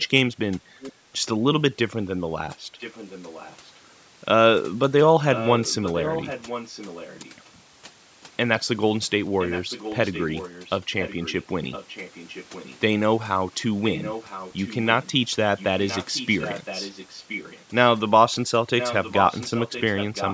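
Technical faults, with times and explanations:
Throughout, overdone noise removal: the background drops and breaks up into twinkling, warbling specks. A noise suppressor set too hard is shutting individual frequency bands whenever they sink toward its noise estimate, which takes the quieter parts of the speech along with the noise. Unlike a low-bitrate codec, the damage is tied to level, with softer moments hollowing out most, rather than a steady smearing across all the audio.
0.0–0.07 s, 0.8–0.93 s, 2.79–3.7 s, 5.32–7.49 s, 8.22–8.26 s, 9.39–12.79 s, 13.83–17.65 s and 18.78–20.34 s, echo leak: a delayed copy of the speech trails the original by about 1.01 s, ranging from roughly 40 dB below the direct speech to roughly 10 dB below the direct speech. The likely cause is a far end playing the call through a loudspeaker, with its echo canceller letting part of the pickup through. Room reverberation would instead be a smooth tail starting immediately, not a distinct repeat a full second later.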